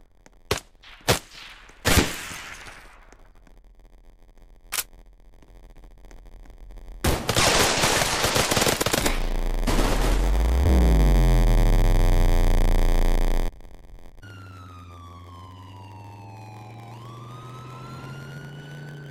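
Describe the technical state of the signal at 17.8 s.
At 17.8 s, as throughout the clip, a block size mismatch (padded) zero-fills each 512-sample block, giving an 86.1 Hz buzz and 0.938× speed with the timbre kept; the waveform shows regular gaps.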